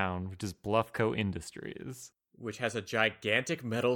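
A faint, brief glitch at 3.59 s is a corrupt frame decoded: bit errors in roughly two compressed frames misplaced energy across frequencies, and the decoder played them anyway.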